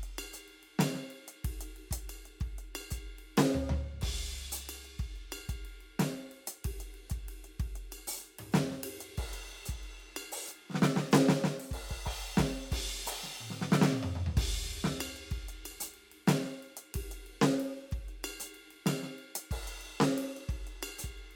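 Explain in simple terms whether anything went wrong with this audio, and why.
Nothing went wrong with this music: there are no audible faults anywhere in it.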